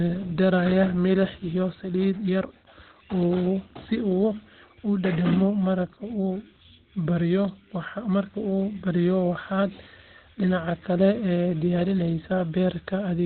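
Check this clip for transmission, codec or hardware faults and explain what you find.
One codec fault runs through the whole clip. Throughout, the speech carries Opus compression damage, and it is heavy. Nothing sounds above 4.3 kHz. That narrow band fits the encoder's SILK speech mode at a very low rate, likely around 12 kbps. The result is muffled and hoarse.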